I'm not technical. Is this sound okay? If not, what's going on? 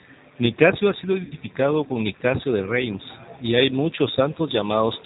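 No. G.729 codec, throughout: the speech passes through a low-rate phone codec that rebuilds each voice from a simplified model of the mouth and pitch. Everything above 4 kHz is removed, so the speech sounds muffled, a little rough and slightly robotic.

VoIP packet loss concealed by the speech codec, 1.25 to 1.33 s, just after "ha sido": about 50 ms of audio went missing. The decoder filled the gap by stretching the last sound, giving a brief, fading smear before the voice recovers.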